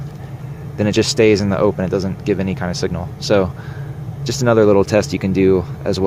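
No technical faults are audible.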